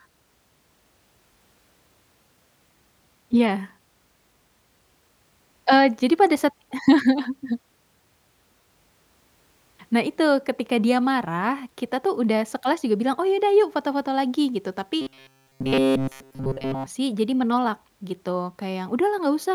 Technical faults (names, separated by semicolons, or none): robotic sound from repeated short buffers